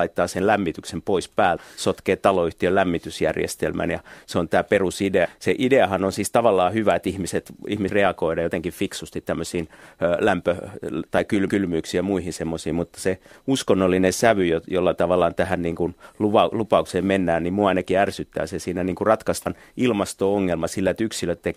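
Compressed frames are skipped at 5.24 to 5.26 s, 7.88 s and 19.45 s. The speech jumps ahead by about a third of a second, nearly half a second, and a short fraction respectively, in whole multiples of a roughly 26 ms frame. Unlike a dropout, no silent gap appears, and overlapping frames turn each join into a smeared blip rather than a sharp click.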